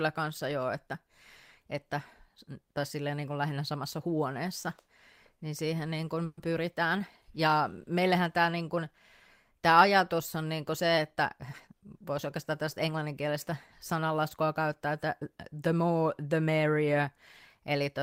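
At 6.25 s the speech stalls in a call audio freeze that lasts until 6.39 s. For about 120 ms the last sound is stretched into a fading buzz or hiss, with no full silence. Packets were likely held up on the way, so the jitter buffer ran dry and the receiver kept extending what it had. When the audio resumes, it picks up where it stopped. Nothing is lost, but everything after runs 120 ms later.

From 11.16 s to 13.06 s a jitter buffer speed-up follows. The speech runs about 6 percent faster, yet its pitch does not change. It sounds slightly hurried. The buffer was holding more audio than it aims for. To shrink the delay, the receiver cut out many short slices, each one or a few pitch periods long. Together they remove about a tenth of a second.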